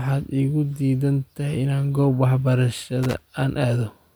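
At 3.03 s there's loose connector crackle, a scratchy burst of about 0.18 s: a dodgy contact making and breaking, chopping the speech into irregular crackle.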